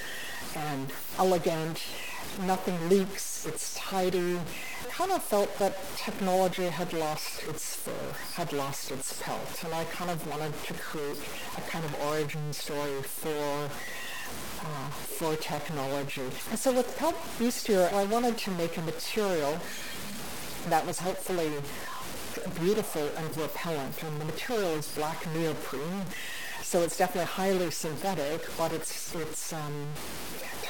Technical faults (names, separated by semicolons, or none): stuck bit